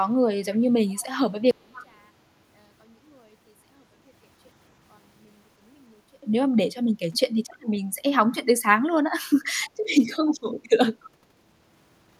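Echo leak first appears at 0.53 to 0.59 s and again at 0.88 to 1.06 s: a delayed copy of the speech returns about 289 ms after the original, roughly 25 to 30 dB below it. The likely cause is a far end playing the call on a loudspeaker whose echo canceller let part of the microphone pickup through and sent it back. The same 289 ms copy recurs at 1.73 to 1.86, 7.13 to 7.2, 9.62 to 9.67, 10.28 to 10.33 and 11.04 to 11.1 s.

One channel inverted runs from 1.51 to 6.23 s. The level falls by about 37 dB, so the speech nearly disappears and only a residual copy remains. This is likely a stereo source with one channel's polarity reversed: when the two channels are summed to mono, everything they share cancels, and only the small difference between them survives. The echo at 1.73 s falls inside this stretch.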